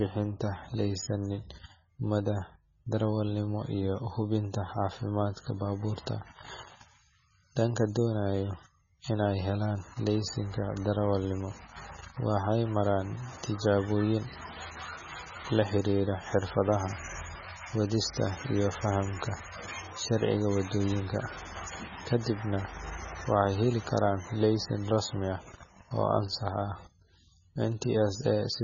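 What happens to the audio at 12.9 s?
At 12.9 s the speech has heavy MP3 compression, present across the whole clip. Nothing is audible above 6.9 kHz, and weak spectral lines flicker between frames, giving watery, swirly sibilants and smeared attacks. The damage fits a very low bitrate, likely around 16 kbps.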